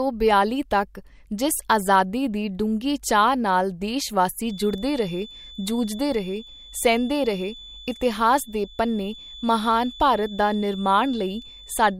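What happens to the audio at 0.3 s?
At 0.3 s the audio is intact, with no audible fault at that point.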